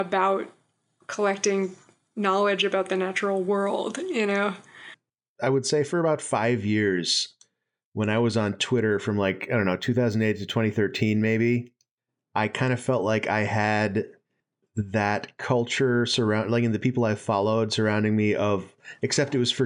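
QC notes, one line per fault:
9.18 to 12.09 s, imaging from linear upsampling. The sound fits a rise from about 22 kHz to 48 kHz using straight-line interpolation. The top of the band dulls. Faint mirror copies appear from 11 to 22 kHz, giving sibilants a light metallic shimmer.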